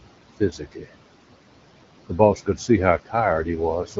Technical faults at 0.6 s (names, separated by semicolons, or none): noise suppressor artifacts; speech cut by the noise suppressor